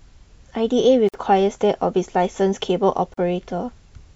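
At 1.09 to 1.14 s and again at 3.14 to 3.17 s, roughly 2 s apart, the speech drops out for about 50 ms and 38 ms: a gap at a join of encoded pieces, where untrimmed encoder delay and end padding leave silence with smeared edges before the sound resumes where it stopped.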